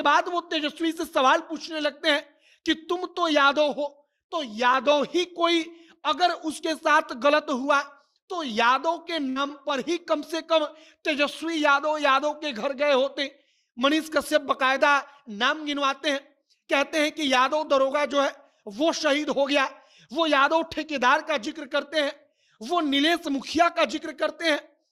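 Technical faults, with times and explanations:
9.29 to 9.51 s, burst of packet loss: a short run of audio went missing or arrived too late, and the receiver papered over it by stretching the last bit of sound for about 61 ms while fading it down, so you hear a brief held buzz or dying hiss. Then playback jumps ahead, with roughly 60 ms of the original skipped and about 11 ms of extra time added.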